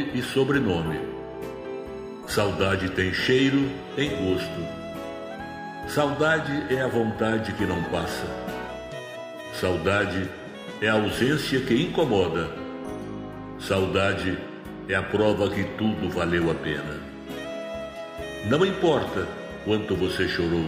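There are no technical faults to describe in this clip.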